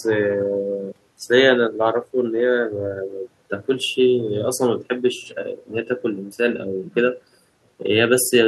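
Listening through this speech recording, nothing stood out as a technical problem.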